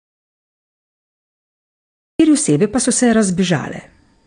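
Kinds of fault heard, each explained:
AAC compression: The speech sounds dull and smeared, with nothing above about 9.8 kHz, and the codec damage is plainly audible as a warbling, fizzy texture on sustained sounds and sibilants. This likely comes from AAC-LC coding at a low bitrate, one that fits about 32 kbps. At such a rate the encoder lowers its cut-off and quantises the remaining frequency lines coarsely against its hearing model, leaving gaps or substitute noise in the spectrum.
audio dropout to silence: The clip opens in pure silence with no room tone, already under way when the clip begins, and sound only enters at 2.20 s. Whatever was spoken during that stretch is gone. The likely cause is that the audio input was lost, through a disconnected device, a failed link or a stray mute, while the recorder or encoder kept writing silence until the signal returned.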